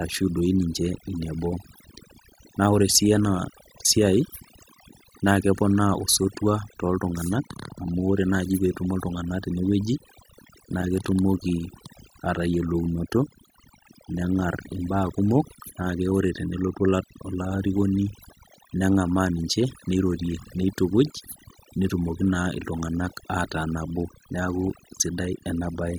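Overdone noise removal runs through the whole clip. The noise reduction was set too strong, so it drives frequency bands near its noise estimate far down or off. Quiet parts of the speech vanish with them. Between phrases the background drops to near silence with twinkling specks.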